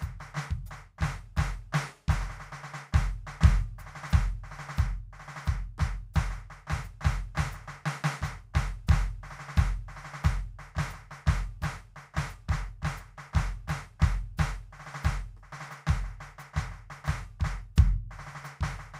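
No technical faults can be heard anywhere in this music clip.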